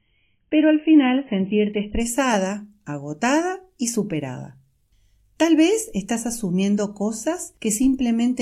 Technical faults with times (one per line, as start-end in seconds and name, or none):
0.00-2.00 adaptive stream starting at a low bitrate